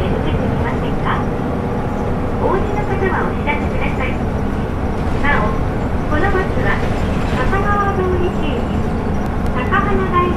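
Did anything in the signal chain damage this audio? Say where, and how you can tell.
Yes, at the playback stage: CD scratch ticks. Between 8.86 and 9.67 s there are five short ticks at about six a second, each a couple of milliseconds at most. A scratch beat the error correction once per revolution, so the player patched or muted those samples.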